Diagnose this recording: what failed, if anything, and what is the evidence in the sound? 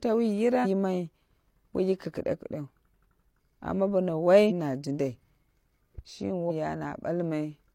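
Codec: damaged data in the compressed stream, heard as garbled blips at 0.61–0.67, 4.46–4.52 and 6.46–6.51 s; the decoder misreads corrupt frames, then resynchronises.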